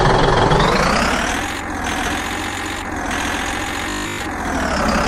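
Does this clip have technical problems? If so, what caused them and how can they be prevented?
Yes. Robotic sound from repeated short buffers runs from 3.90 to 4.20 s: essentially all of that stretch becomes a rigid, metallic 50 Hz buzz, likely because audio arrived too late and the last 20 ms kept repeating while fresh sound was skipped. Larger buffering or a steadier, less loaded audio path would prevent it.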